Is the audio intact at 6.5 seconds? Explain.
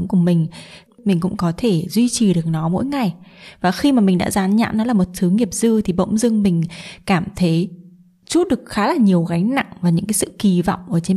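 Yes, the speech at 6.5 seconds plays through cleanly, with no dropout, click, distortion or other fault at that moment.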